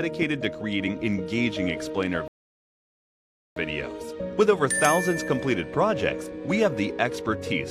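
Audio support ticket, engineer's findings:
Rebuffering stall, 2.28 to 3.56 s: audio drops to dead silence, then picks up exactly where it left off. Nothing skipped, just 1.28 s added. Player-side buffer ran dry, so playback waited until the download caught up.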